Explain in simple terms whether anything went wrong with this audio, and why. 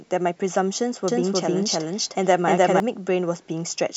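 A doubled audio track appears from 1.08 to 2.8 seconds: the speech is heard twice, with a second copy trailing roughly a third of a second behind and about as loud as the first. It sounds like an instant, flat repeat rather than a natural echo, with no fading tail, and it switches on and off abruptly. The likely cause is the same sound being recorded a second time through a slower route and mixed back in.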